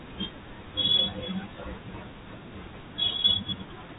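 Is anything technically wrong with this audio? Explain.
No, no technical faults heard.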